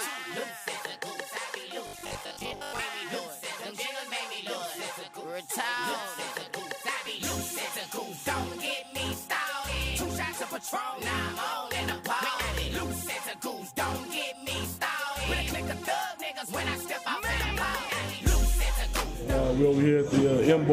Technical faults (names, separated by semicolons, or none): robotic sound from repeated short buffers